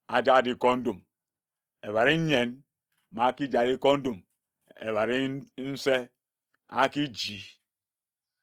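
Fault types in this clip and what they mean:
Opus compression: The speech sounds grainy and rough throughout. Bands starved of bits are filled with noise, so few spectral gaps open and the top end stays present. This likely comes from Opus in its music mode, fitting a rate near 24 kbps.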